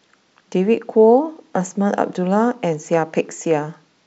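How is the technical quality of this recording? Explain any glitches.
No glitches or technical faults can be heard anywhere.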